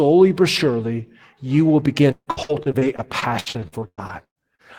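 Speech, where repeated packet loss from 2.11 s to 4.62 s leaves holes, the longest 152 ms, patched by extending earlier sound, making it choppy and robotic.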